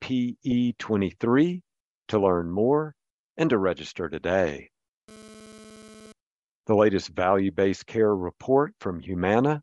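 Throughout the speech there is a breathy, grainy edge on the upper band, with the top end replaced by noise-like fill. This is most likely Bluetooth LC3 compression, and the degree of damage fits a bitrate around 48 kbps with 10 ms frames.

From 0.51 to 0.53 s, lost LE Audio frames cause a brief smeared, noisy patch. The decoder repeats the previous frame's spectrum with randomised signs, and the gap matches a single 10 ms frame. Pitched content turns hiss-like for that instant.

From 5.09 to 6.12 s, just after "and to register today", a GSM phone buzz appears. It is a harsh, raspy tone at about 217 Hz, rich in harmonics, sitting about 23 dB below the speech. The audio circuitry is rectifying a nearby handset's radio bursts, and the stop-start pattern points to a data transfer.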